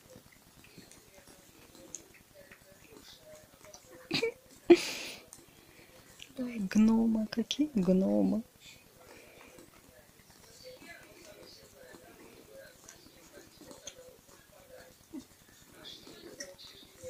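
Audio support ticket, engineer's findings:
Wi-Fi interference. Nearby Wi-Fi radio coupling into an analogue stage, probably input cabling or preamp, where the RF gets rectified. Beacon every 102.4 ms becomes a steady tick near ten per second, present throughout, with rasping bursts during data traffic. Level roughly 35 dB below the programme.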